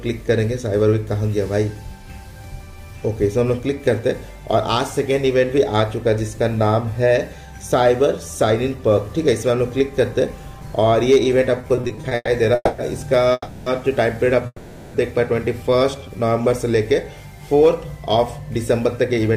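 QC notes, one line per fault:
11.61–12.29 s, repeated stalls (stutter): packets arrived late over and over, so the jitter buffer ran dry nine times, the longest wait 120 ms. The receiver stretched the last sound across each gap, about 280 ms filled, 41% of the span, so the audio drags and stutters with nothing lost.
12.55–12.80 s, 13.32–13.68 s and 14.46–14.96 s, call audio freeze: the sound hangs on a fading continuation of what came before, for 230, 340 and 480 ms, each tailing into a brief silence of 20 to 30 ms before resuming where it stopped. Packets held up in transit, emptying the jitter buffer, are the likely cause.
15.63–16.50 s, jitter buffer slow-down: to rebuild its reserve the receiver repeated single pitch periods many times, adding about 109 ms. Playback runs at 89% speed with unchanged pitch, so sounds come out drawn-out.
18.79–19.29 s, jitter buffer speed-up: with surplus audio queued, the receiver cut short pitch-period pieces in succession, roughly 40 ms in all. 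The audio plays at 107% speed at the same pitch and sounds hurried.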